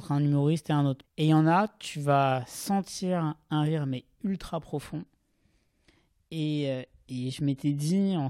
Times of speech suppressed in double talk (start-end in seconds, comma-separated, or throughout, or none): none